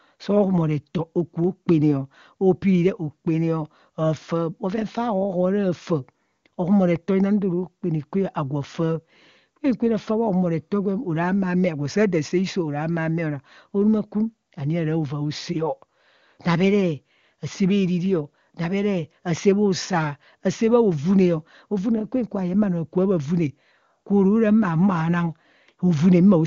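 No technical faults occur at any point in the speech, which comes through an AMR wideband (HD Voice) codec that sounds as clear as its top rate of around 23.85 kbit/s would suggest.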